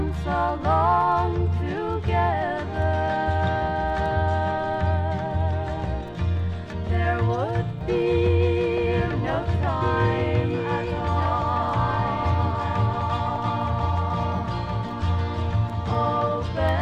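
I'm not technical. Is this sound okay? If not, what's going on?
No. From 7.81 s to the end there is a doubled audio track: a somewhat quieter copy repeats everything about two seconds late, likely from the sound being captured twice.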